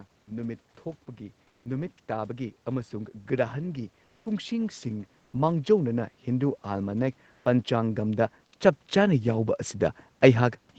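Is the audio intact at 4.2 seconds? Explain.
No: comfort noise in place of the background runs from 4.05 to 4.25 s, likely from Opus discontinuous transmission, swapping the real background for steady, featureless noise shifted by about 3 dB.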